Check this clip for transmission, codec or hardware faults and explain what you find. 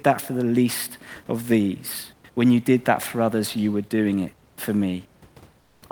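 One transmission fault is audible, near the end of this speech clip. From 5.60 to 5.82 s, about 220 ms, comfort noise takes the place of the background. It is likely discontinuous transmission, where the sender stops sending during a pause and the receiver synthesises noise, as Opus DTX does. The room noise, about 35 dB below the speech, turns smooth and featureless and drops about 6 dB. Unlike a dropout or a noise gate, the pause is filled rather than left silent.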